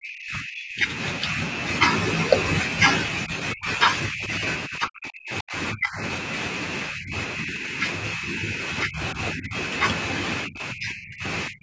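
From the start to 1.41 s, then 3.25–6.01, 6.89–7.79, 8.13–9.56 and 10.46–11.62 s, the speech keeps sinking or dropping out in chunks, at worst by roughly 40 dB. That's likely speech suppressed in double talk: the echo canceller mistook the talker for echo and ducked them.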